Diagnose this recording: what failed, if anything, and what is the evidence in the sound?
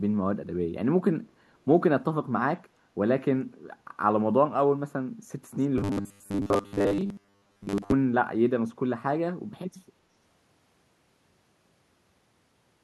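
Echo leak, call processing. From 5.6 to 5.67 s, a very faint copy returns 360 ms late. A loudspeaker echo canceller likely let residue through.

Robotic sound from repeated short buffers, driver or buffer stage. From 5.78 to 7.92 s, a rigid 100 Hz buzz appears. This is likely from repeating 10 ms blocks, replacing most of the audio.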